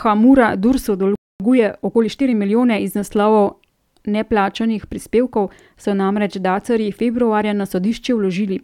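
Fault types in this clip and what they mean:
Playback stall: The speech cuts to silence at 1.15 s for about 245 ms. The player likely ran short of data.
Time-compressed catch-up: From 1.40 to 3.02 s the speech runs about 1.15 times fast at normal pitch. Small pieces are cut out and cross-faded to shorten the backlog.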